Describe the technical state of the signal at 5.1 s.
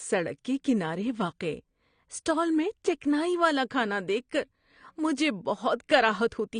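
At 5.1 s the speech still carries the AAC compression damage present throughout, likely from a low-bitrate AAC-LC encode, around 32 kbps by the sound. Nothing remains above 9.7 kHz, and the starved spectrum leaves the speech dull, smeared and fizzy on sibilants.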